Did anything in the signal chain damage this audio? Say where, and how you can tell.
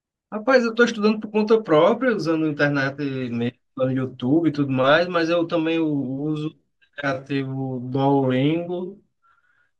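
Yes. From 5.86 s to the end at 9.79 s the speech abruptly drops to about 0.65 times its earlier pace, yet the pitch holds steady. The slowed stretch drags, because short pieces of the waveform are repeated to fill the extra time. This is a time-stretched section, likely introduced by pitch-preserving stretch processing in editing or playback. A plain slowdown such as a sample-rate mismatch would drop the pitch along with the pace.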